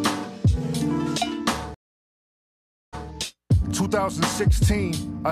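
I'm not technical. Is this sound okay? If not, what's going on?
No. At about 1.74 seconds the connection carrying the audio dropped and the player had to reconnect, a stream reconnect. The sound goes silent for roughly 1.2 seconds while the player re-establishes the link and restarts its decoding from scratch. When the audio returns at about 3.07 seconds, it picks up around 0.14 seconds earlier than where it cut off, so you hear a brief stretch of the sound repeated.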